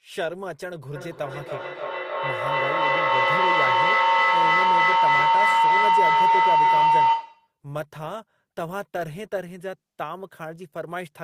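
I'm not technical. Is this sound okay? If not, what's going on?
No. From 0.95 s to 7.6 s a shrill, steady whistle rises over the speech, pitched at roughly 1 kHz and pulsing about three times a second, until it ends up much louder than the talking. This is a feedback howl: two devices in the same room are joined to one call, so each loudspeaker's sound reaches the other's microphone and loops back, getting louder on every trip. The pulsing follows the time one trip round the loop takes.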